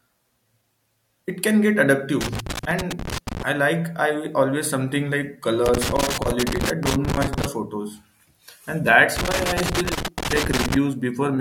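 A speech recording with loose connector crackle in three bursts. The first runs from 2.21 to 3.43 s, the second from 5.66 to 7.46 s, and the third from 9.16 to 10.76 s. Each lasts between about 1.2 and 1.8 s. The sound turns to irregular scratching and crackle. A worn or dirty contact is making and breaking as it moves. That chops the signal in rapid, uneven bursts.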